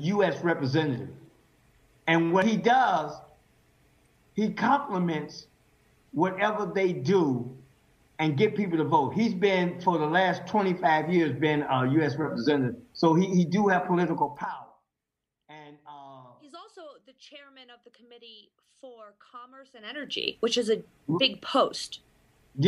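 From 14.12 to 14.84 s the level drops by roughly 25 dB with zipper noise: the gain moves in 1 dB steps about forty times a second, unsmoothed, so each step clicks. The same ticking returns from 19.71 to 20.20 s as the level climbs back.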